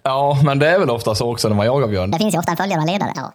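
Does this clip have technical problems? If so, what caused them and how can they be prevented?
Yes. From 2.12 s to the end, right after "när man jagar björn", the clip has a section at the wrong speed. The likely cause is that this stretch was played or edited against the wrong clock, running it 1.53 times faster than it was recorded. Because speed and pitch move together, the speech suddenly turns hurried and rises by roughly seven semitones. To prevent this, keep the clock and sample-rate settings consistent across every editing and playback stage.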